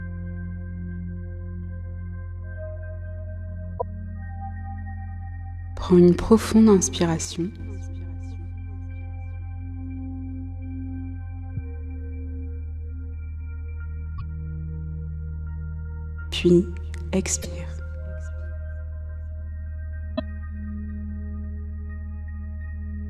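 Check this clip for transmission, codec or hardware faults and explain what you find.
Two kinds of fault are present: four bursts of damaged compressed data and one brief channel dropout.

Damaged data in a compressed stream, at 3.75–3.82 s, 14.15–14.22 s, 17.39–17.46 s and 20.13–20.20 s: corrupted frames make the decoder lose sync and hunt for the next header, giving short chirps, squawks, clicks or holes.

One channel drops out, 7.25–7.60 s: the sound abruptly falls by about 6 dB for that moment, likely because one stereo channel vanished before the mono sum.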